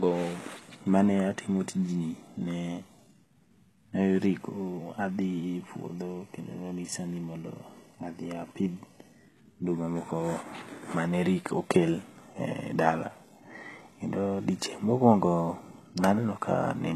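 HE-AAC compression runs from start to finish: the speech above roughly 12.3 kHz is gone, and the upper band sounds rebuilt rather than captured, likely from spectral band replication at a rate near 16 kbps, so s sounds turn gritty and metallic.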